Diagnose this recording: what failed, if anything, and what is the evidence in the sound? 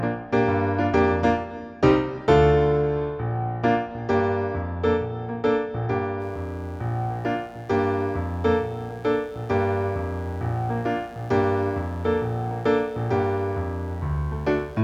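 Mains buzz enters at 6.18 s and continues to the end: a steady, raspy buzz around 30 dB below the signal, built on 60 Hz harmonics extending into the kilohertz range. The analogue wiring stage failed, with switching spikes from a dimmer, rectifier or unshielded run coupling in twice per mains cycle.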